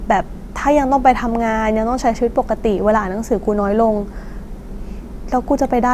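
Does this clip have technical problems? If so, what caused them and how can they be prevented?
No, nothing in this speech recording points to a technical problem, so there's nothing here that needs preventing.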